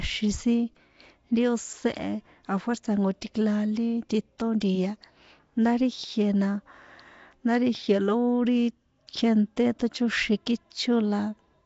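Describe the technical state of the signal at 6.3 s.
At 6.3 s the speech is still passing through what is likely Nellymoser compression, which runs through the whole clip. That codec works on short blocks with a fixed, small bit budget, so quiet bands get no bits and are filled with noise. The damage here is plainly audible, at a density that fits about 32 kbps: a rough, hissy halo around the speech, a smeared, underwater quality, and nothing above 7.7 kHz.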